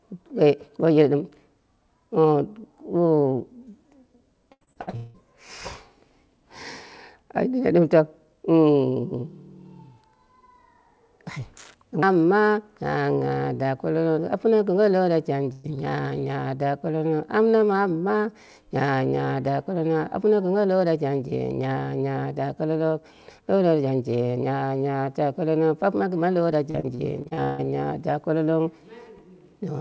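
Repeated packet loss (robotic sound) runs from 4.52 to 5.17 s. Six gaps in quick succession, the longest 181 ms, were each patched by stretching the previous sound, so about 63% of that span is filled in. The sound turns choppy, with roughly 420 ms missing.

A burst of packet loss at 15.52 to 15.67 s drops about 120 ms in one go. The receiver holds the last sound and fades it across the gap, giving a brief buzz or hiss before the audio picks up again with that stretch gone.

Repeated packet loss (robotic sound) returns from 26.71 to 27.61 s. Here seven gaps, the longest 153 ms, are concealed across about 37% of the span, again leaving a robotic, broken texture with around 330 ms lost. Throughout, the call path passes nothing above 8 kHz, which fits a wideband call codec.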